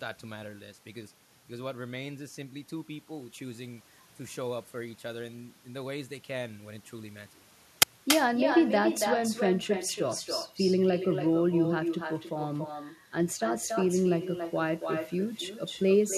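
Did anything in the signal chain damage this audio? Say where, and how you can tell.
Yes, two stages left damage. In the call processing, an echo with no canceller runs through the whole speech clip. Each phrase is followed by a quieter copy, about 7 dB below the speech, arriving roughly a third of a second later. The far end's loudspeaker fed its microphone, and no canceller removed that path before the sound returned. Room reverberation would trail off smoothly, but here the copy is a distinct, delayed repeat, which points to the network round trip rather than the room.

At the driver or buffer stage, an uninitialised buffer produces a sudden, loud burst of digital noise at 7.82 s, lasting 10 ms. A block was sent to playback before any audio had been written into it, so whatever values were left in memory came out as samples. A dropout would leave a gap and a codec glitch would smear nearby sound, whereas this is an abrupt, block-length blast unrelated to the surrounding speech.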